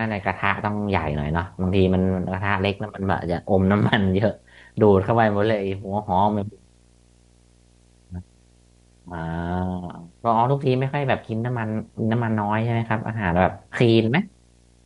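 Video or display buzz, from a screen coupling in, sits under the speech throughout at 59.94 Hz. Its 15.7 kHz line whine rules out mains hum.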